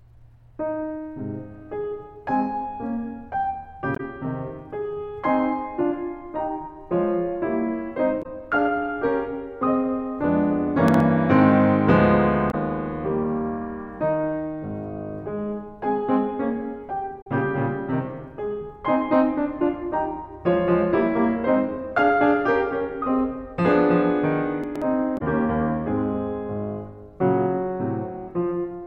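At 3.93 to 4.00 s the music breaks into a brief glitch. This is damaged data in a compressed stream. Corrupt bytes made the decoder misread frames and lose sync until it found a clean frame header. The same glitch returns at 8.19 to 8.26 s.

At 10.88 to 11.00 s the music jumbles. These are chunks out of order. One 60 ms chunk played one chunk late, creating hard joins.

Damaged-data blips recur at 12.48 to 12.54 s and 17.20 to 17.27 s. At 24.64 to 24.82 s another garbled moment occurs, with a 60 ms chunk two chunks late. A final glitch follows at 25.14 to 25.21 s.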